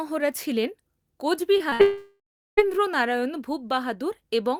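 Short concealed packet loss at 1.57 to 1.62 s and again at 1.70 to 1.73 s: each time about 20 ms of audio failed to arrive, and the receiver bridged the hole by extending the preceding sound before blending back, heard as a brief smear or wobble.

A burst of packet loss follows at 1.73 to 1.81 s. About 60 ms went missing in a row, so the last sound is stretched into a held buzz or hiss that fades, and the speech picks up further on with that piece absent.

From 1.81 to 2.59 s comes a gap most likely caused by a long network dropout. About 760 ms of speech is missing. The last sound is carried on and fades away, leaving roughly 370 ms of silence before the audio returns, skipping everything lost in between.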